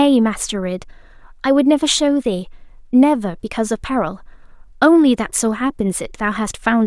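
Nothing stood out on listening to this recording of speech.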